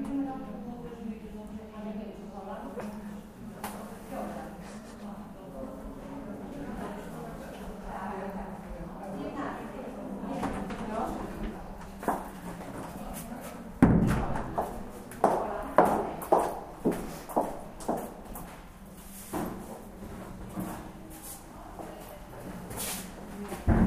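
No technical faults can be heard anywhere in this recording of sounds.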